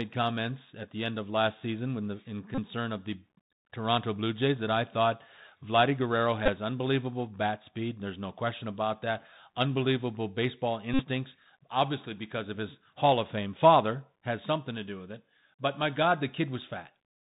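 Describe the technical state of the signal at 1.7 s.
At 1.7 s the speech carries Bluetooth CVSD headset codec damage, present from start to end of the clip. The codec sends one bit per sample, saying only up or down, with a step size that adapts. That fits a 64 kbps stream. Nothing above 4 kHz passes, so the sound is narrowband. Loud high content outruns the step and distorts. S sounds turn scratchy. A granular hiss sits under the speech. The damage is plainly audible.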